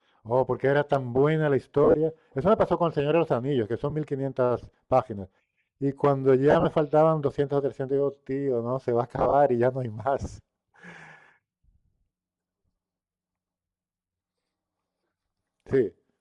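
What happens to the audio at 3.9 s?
Right around 3.90 to 3.93 s there's a brief patch of lost LE Audio frames. For about 20 ms the decoder had nothing new to play, so it reused the last spectrum with its signs scrambled. That gives a quick noisy smear in place of the speech, which fits two missing 10 ms frames. It's too short for the concealment to fade out, so you hear a grainy blip rather than a dip to silence.

Underneath that, and through the whole clip, the speech has a plainly audible breathy, grainy edge on top, with noise standing in for fine upper detail. That's most likely Bluetooth LC3 compression: the codec throws away much of the upper spectrum and fills the gaps with noise. The character fits a setting somewhere around 48 kbps with 10 ms frames, which is also why the dropout above lands in frame-sized chunks.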